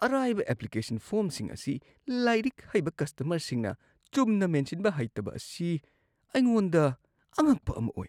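Listening to the speech recording, nothing stood out as a technical problem at any point.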